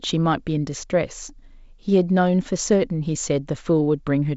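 Nothing goes wrong anywhere in this speech recording; it's simply carried over G.722 wideband telephone coding at 56 kbit/s, so there's nothing above about 7.7 kHz and just the light coding grain you'd expect from that path.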